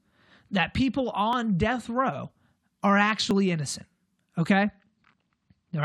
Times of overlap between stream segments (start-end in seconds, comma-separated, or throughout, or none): 1.33, 3.31